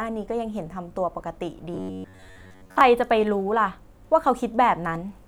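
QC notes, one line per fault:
1.74–2.81 s, robotic sound from repeated short buffers: the speech turns into a rigid, metallic buzz locked at about 94 Hz that still loosely follows the speech. The likely cause is audio arriving too seldom, so the playback fills the gaps by looping a fragment of roughly 10.7 ms, one over the buzz frequency, while most of the real signal, around two thirds or more, is skipped.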